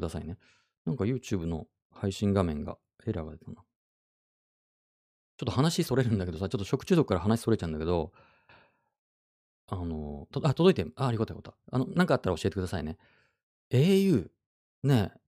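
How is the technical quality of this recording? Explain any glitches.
No technical faults can be heard anywhere in the recording; the signal stays intact and stable throughout, with nothing in it that calls for explanation.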